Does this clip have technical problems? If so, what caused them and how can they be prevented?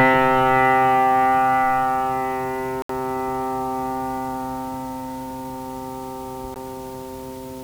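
Yes. The sound cuts to complete silence at 2.82 to 2.90 s, lasting 72 ms, and again briefly at 6.54 s for 17 ms, then carries on. On a waveform these show as flat gaps, and on a spectrogram as blank vertical stripes across all frequencies. The likely cause is a Bluetooth stall: interference delayed packets until the headphones' buffer ran empty, and playback paused until they arrived. Keeping the phone close to the headphones, with a clear line of sight and less 2.4 GHz traffic nearby, helps prevent it.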